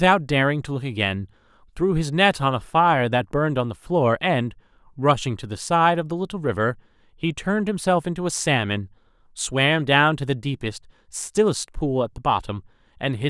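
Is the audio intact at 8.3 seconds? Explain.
Yes, the speech at 8.3 seconds is intact, with no dropout, click, distortion or other fault at that point.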